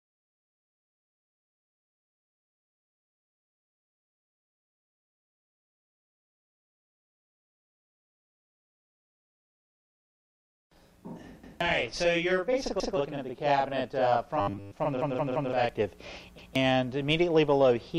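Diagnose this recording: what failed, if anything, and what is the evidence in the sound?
Channel delay (doubling), driver or buffer stage, 9.69 to 15.69 s: one channel lags about 43 ms, fitting a 2048-sample buffer. Unlike reverb, it is a single equal-level slap.

Repeated buffer, driver or buffer stage, at 11.44, 12.80, 15.02 and 16.38 s: a 171 ms piece replays with hard joins, three extra times at 15.02 s. These are audible stutters, not buzz.

Robotic sound from repeated short buffers, 14.41 to 14.73 s: a rigid 100 Hz metallic buzz, likely from 10 ms repeats too short to hear individually.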